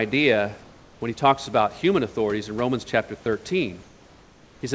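Speech clip where discontinuous transmission likely halted the sender during pauses, so the receiver substituted comfort noise in place of the background at 0.62 to 1.01 s and 3.83 to 4.61 s: the room noise, about 31 dB below speech, turns steady, featureless and about 3 dB quieter, with the wideband call path's top ending near 8 kHz.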